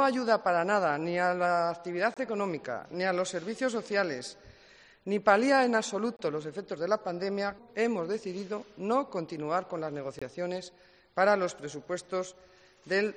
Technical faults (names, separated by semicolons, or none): gap between chunks